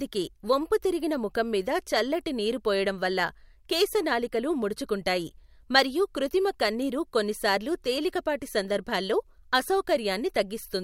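No technical faults are audible.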